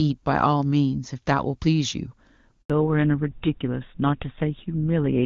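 At 2.62 s the speech cuts out for about 80 ms, until 2.70 s. This is a handover gap. The call switched networks, and no speech frames arrived during the switch. The sound drops away abruptly, and whatever was said in that moment is lost.

From 2.70 s to the end, the call falls back to narrowband. Before this point the HD Voice audio is clear and full. After it, nothing above 4 kHz remains. The speech turns duller and rougher, which points to an older codec such as GSM full rate.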